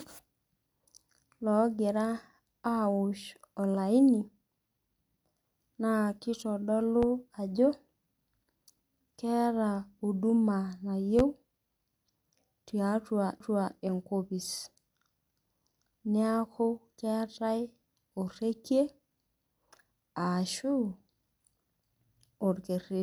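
A sudden voltage step entered the signal path at 7.03 to 7.06 s, most likely from a plug, a switch, static or a driver glitch, and the following circuitry shaped it into a single loud pop peaking about 10 dB above the speech. A second loud pop of the same kind follows at 11.19 to 11.22 s, harder still at about 15 dB over the signal. Each is a brief, sharp thump laid on top of the talking, which runs on uninterrupted beneath it.

At 13.40 s comes a CD skip. The player's laser jumped off its track onto another turn of the disc's spiral, so playback mutes very briefly, for about 5 ms, and then resumes from a different point on the disc. This is heard as a small tick, after which the speech carries on from somewhere else rather than continuing smoothly from where it broke off.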